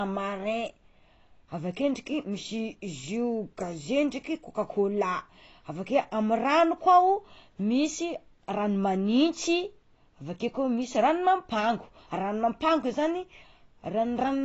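Throughout the speech, AAC compression is plainly audible, likely from an encode at a low bitrate around 24 kbps. Nothing survives above 7.8 kHz, so sibilants turn dull and smeared. A spectrogram shows a flat ceiling there.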